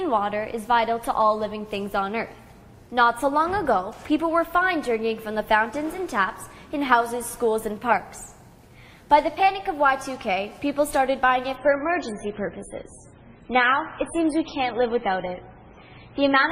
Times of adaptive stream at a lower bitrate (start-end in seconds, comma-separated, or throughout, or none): 11.56-16.52